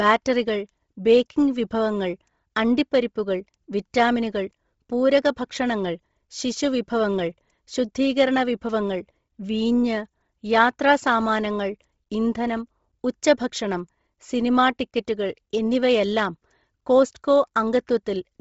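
From start to finish the speech has a breathy, grainy edge, with the upper band sounding hissy and smeared rather than detailed, and nothing at all above about 7.7 kHz. This is heavy Bluetooth LC3 compression, the likely cause: the LE Audio transform codec, starved of bits, zeroes much of the upper spectrum and patches it with noise. The thickness of the damage points to a low rate around 24 kbps with short 7.5 ms frames.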